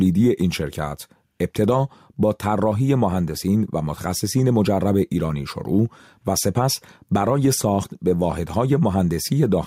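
Right from the start and all the way through, there's gain pumping, with the level swinging by around 5 dB. It's likely the input gain was cranked way too high for the mic, with a fast limiter or compressor clamping down every time things got loud. The result is a squashed, breathing sound where loud and quiet parts sit uncomfortably close together.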